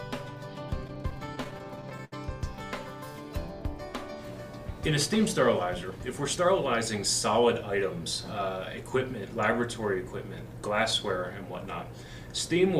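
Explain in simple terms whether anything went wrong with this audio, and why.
Repeated stalls (stutter) occur from 0.87 to 2.13 s. Network packets arrived late, so the playback buffer emptied 15 times, and the receiver stretched the last sound to cover each wait, the longest being 74 ms. Nothing is lost, but the audio stumbles and drags.

Jitter buffer speed-up follows from 5.91 to 6.55 s. The buffer had built up more audio than it needed, so the receiver trimmed tiny slices, about 40 ms in all, to catch up. The sound plays at 105% speed, noticeably hurried, without changing pitch.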